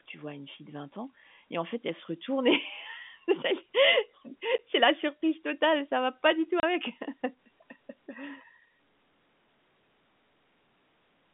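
Packet loss filled with silence breaks up this speech recording twice: a 10 ms gap at 4.58 s and a 30 ms gap from 6.60 to 6.63 s. Audio packets failed to arrive, and the receiver played silence in their place, so the sound drops out abruptly with hard edges. The gap lengths fit a 10 ms packet size, with one packet missing in the first dropout and three in the second. The narrow telephone band of the G.711 line coding can be heard throughout.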